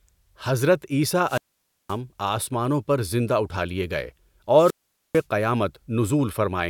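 At 1.23 to 1.98 s and again at 4.56 to 5.25 s the speech breaks up in a wireless microphone squelch dropout. The radio link weakens, hiss swells, then the receiver's squelch mutes the output, about 0.52 s before "آسمانوں پر" and about 0.45 s after "لئے گئے". On a spectrogram, broadband noise brightens and then collapses to a near-empty column. The waveform flattens to almost nothing before the speech resumes.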